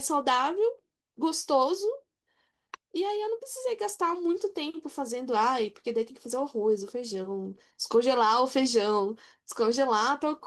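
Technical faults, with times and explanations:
No technical faults can be heard in this speech recording.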